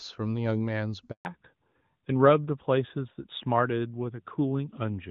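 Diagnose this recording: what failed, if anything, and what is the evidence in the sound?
A handover gap at the network stage: the speech dies away within a few tens of milliseconds at 1.11 s and stays silent until 1.25 s, a 140 ms hole. No speech frames arrived while the call moved between networks, so that stretch of speech is simply missing.

A fallback to narrowband at the codec stage: from 1.25 s to the end, nothing above 4 kHz survives, and the speech sounds duller and rougher. Before the gap, the wideband HD Voice sound is clean and fits AMR-WB at 23.85 kbit/s. After the switch, the narrower band fits AMR-NB at 12.2 kbit/s.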